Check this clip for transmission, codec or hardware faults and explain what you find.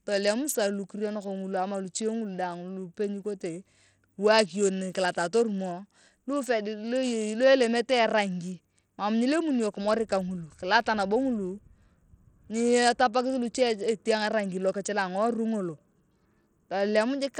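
One codec fault runs through the whole speech recording: plainly audible damage that points to Bluetooth SBC compression, likely at a starved setting near 80 kbps. Its few fixed sub-bands leave the top bands short of bits, so treble flickers in and out over gritty quantisation noise. A spectrogram shows ragged, blocky gaps above a few kHz.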